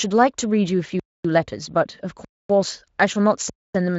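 Hard-edged silent holes of 250 ms interrupt the speech at 1.00, 2.25 and 3.50 s. This is a gap between chunks: each 1-second block plays intact, followed by a pause.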